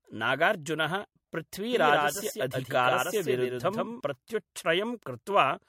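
The whole speech clip sounds swirly, hollow and smeared, with nothing above 16.4 kHz. This is generation loss, likely from several passes through an MP3 codec at around 64 kbit/s. From 1.73 to 4.01 s, a doubled audio track appears. A dry copy, about 5 dB quieter, trails by around 150 ms, likely from a second capture path, and starts and stops abruptly.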